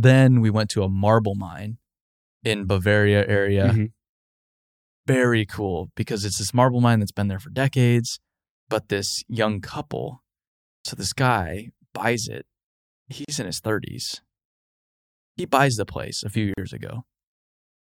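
A gap at a join of encoded pieces opens at 13.25 to 13.28 s, just before "in his", and again at 16.54 to 16.58 s, right after "the place a few". Each is a hole of about 37 to 38 ms in continuous speech, with its edges smeared by the codec. The speech was encoded in separate pieces and butted together untrimmed, so encoder start-up delay and last-frame padding remain before the speech resumes where it stopped.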